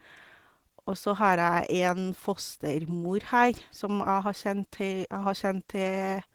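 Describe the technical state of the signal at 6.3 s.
Opus voice compression runs through the whole clip. At 6.3 s the speech sounds plainly hoarse and slightly robotic, consistent with hybrid coding at about 16 kbps. On a spectrogram, content reaches 20.2 kHz, but the band above 8 kHz looks coarse and blotchy.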